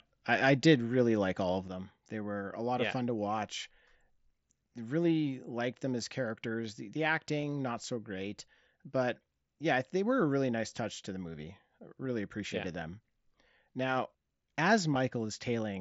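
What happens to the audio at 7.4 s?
At 7.41 s, a couple of voice packets between headset and phone went missing, and the receiver filled the roughly 15 ms gap by repeating the closest-matching stretch of recent waveform. This is concealed Bluetooth headset packet loss. Being a run of two lost frames, the patch sounds like a brief buzzy tone held at full level, with a small warble where real audio returns.

That moment also falls inside a longer fault. From 1.68 s, just after "really like all of", through to the end, one stereo channel has dropped out, likely in the capture or transport chain. In the mono sum, the shared content sits about 6 dB lower throughout.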